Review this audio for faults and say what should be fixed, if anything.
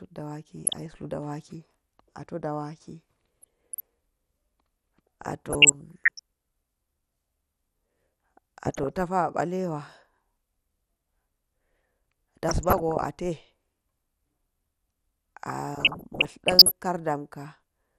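MP2 compression, throughout: the speech sounds dull and granular, with upper bands flickering out, likely from Layer II coding at a low rate, around 80 kbps. Encode at a higher bitrate.

DAB burbling, at 0.65–1.06, 3.42–3.80, 5.22–6.19, 8.65–8.98, 12.48–13.09 and 15.75–16.72 s: uncorrected bit errors throw short blips of noise into single sub-bands. Improve reception or take a cleaner feed.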